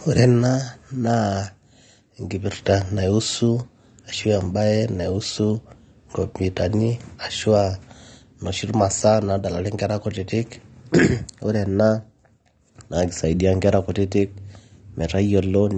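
Throughout the speech, the top end stops dead at 9.7 kHz. Sibilants sound dull and fizzy, and sustained sounds warble. The damage is plainly audible. The likely cause is AAC compression. The sound fits AAC-LC at a low bitrate near 32 kbps, which forces a low cut-off and coarse quantisation.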